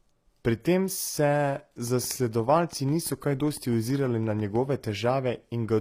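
Speech, with codec damage that is plainly audible throughout and fits HE-AAC compression, likely at a low bitrate near 24 kbps. Only the lower spectrum appears to be coded directly; the treble is rebuilt by spectral band replication, copying lower bands upward under a coarse envelope, so the upper harmonics do not line up with the real ones across the crossover and s sounds take on a synthetic, gritty edge. Nothing is present above 15.5 kHz. From 1.87 s to 4.56 s a train of clicks runs over the speech, at a regular 6 clicks per second, around fifteen in all, each of much the same shape and roughly as loud as the speech itself. They keep ticking through pauses as well. Such a regular pulse train points to something injecting impulses into the signal path, likely interference from nearby equipment or a faulty connection or power supply.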